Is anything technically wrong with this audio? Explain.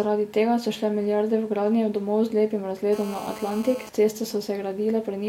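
Yes, there's GSM phone buzz from 2.93 to 3.89 s, right after "gradnje domov z lepim". A nearby 2G phone on a call is transmitting in bursts, and the audio circuitry rectifies those radio pulses into the signal. You get a hard, raspy buzz at about 217 Hz, full of harmonics and unrelated to the speech. It holds steady for that stretch, sitting roughly 15 dB below the speech level.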